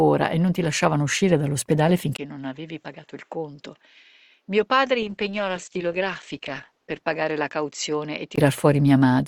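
At 2.17 s a 20 ms gap opens. The level then falls about 10 dB, the spectrogram shows nothing above 7.6 kHz, and a new noise floor sits roughly 45 dB down until 8.38 s. This likely comes from an input switched to a poorer device. From 5.02 s to 7.09 s, a call bitrate drop from 48 to 13 kbps makes the sound rough and watery. On the spectrogram, the detail turns smeared and blocky.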